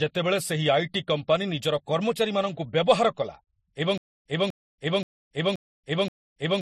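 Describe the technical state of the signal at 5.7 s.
At 5.7 s the audio is inside a stutter with silent gaps that runs from 3.98 s to the end. The same 247 ms burst returns every 527 ms, each followed by about 280 ms of digital silence. This is likely a stalled stream replaying its last fragment on each retry. Unlike a plain dropout, the sound that returns is an identical repeat, not new material.

Transcoding between lossy codecs also affects this point. Nothing is present above 15.5 kHz, and two kinds of coding artefact are heard together. That layering sets it apart from a single low-bitrate encode and fits a likely chain of MP3 followed by Vorbis, both near 40 kbit/s.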